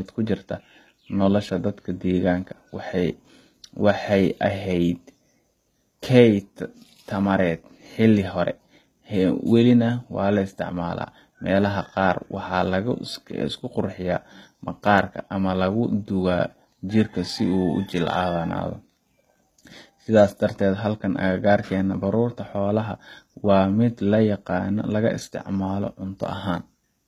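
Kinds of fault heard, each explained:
HE-AAC compression: the upper treble of this speech sounds synthetic and gritty throughout, with s sounds turning lispy and metallic, likely from HE-AAC at around 20 kbps rebuilding highs by copying lower bands upward, so harmonics misalign, and nothing survives above 14.9 kHz.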